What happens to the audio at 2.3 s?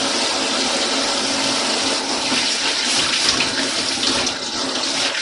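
At 2.3 s a doubled audio track is playing. A second copy of the same sound, likely from a slower capture path or a misaligned edit, is mixed in about 10 dB quieter and roughly 0.7 s behind. It enters abruptly at 2.04 s and cuts off at 4.38 s. Because it is full-band and carries no decay or room colour, it sounds like a distinct, flat echo rather than reverberation.

Under this, MP3 compression is present. Heavy encoding, likely at a low bitrate consistent with 48 kbps, has left nothing above 11.2 kHz and zeroed weak frequency lines from frame to frame. The result is plainly audible: a dull top end, a watery, swirling texture and smeared attacks.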